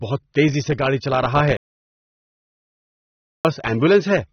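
From the start the speech is dull, with nothing above 6.3 kHz and a plainly audible warbling smear, unlike a clean low-pass. This is AAC compression, likely at a low bitrate around 27 kbps. From 1.57 to 3.45 s the sound cuts to total silence for 1.88 s with no room tone, which marks an audio dropout to silence, likely lost input, rather than a pause.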